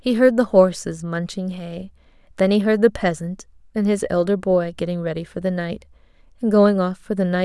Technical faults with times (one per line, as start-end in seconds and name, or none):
none